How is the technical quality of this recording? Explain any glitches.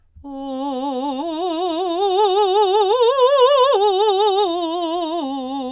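No technical glitches can be heard in this music.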